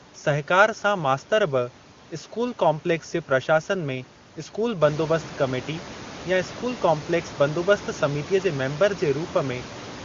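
Nothing is technically wrong with this speech clip.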